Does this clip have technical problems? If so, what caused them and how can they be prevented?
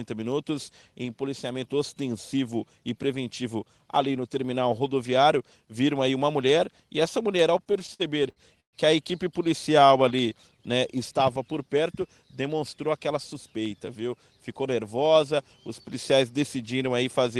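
Yes. From 7.57 to 8.76 s there's a stutter of repeated stalls: packets kept showing up late, the jitter buffer ran dry nine times, and the receiver stretched the last sound to fill about 313 ms, the longest gap 127 ms. A deeper jitter buffer or a steadier network path would prevent this.

Right after, from 9.79 to 10.31 s, there's a jitter buffer slow-down. The buffer was refilling by repeating pitch periods, so the sound drags at 89% speed, adding 63 ms at the same pitch. Letting the buffer settle at a stable target delay would avoid it.

Then from 12.48 to 13.35 s comes a jitter buffer speed-up. The buffer had overfilled, so pitch periods were trimmed, about 50 ms in all, and the sound rushes at 105% speed. Smoother packet delivery would stop the late bursts that trigger it.

Underneath it all, the call path sounds like Opus at around 24 kbps, with the top cut off at 12 kHz.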